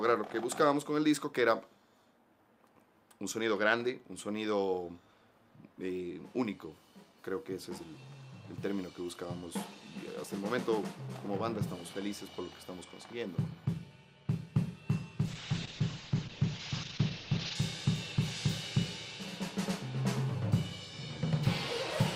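From 15.29 s to 17.61 s the sound turns coarse and watery and loses its top end, with the highs cut off at 8 kHz instead of reaching 20 kHz, and it stays at its worst for about 2.25 s before clearing. This is a call bitrate drop: the bandwidth estimate collapsed, and the encoder was forced to code far more crudely, consistent with a fall from around 64 kbps to roughly 8 kbps, narrowing the band until the rate recovered.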